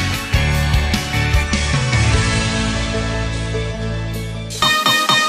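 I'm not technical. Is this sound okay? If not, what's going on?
No, there's a problem in the middle. From about 1.41 s to 3.83 s you're hearing digital radio blending to analogue: the radio lost its digital signal and quickly faded, over about an eighth of a second, to the same station's ordinary FM broadcast, then faded back. During that stretch it sounds slightly quieter, and there's a faint hiss underneath.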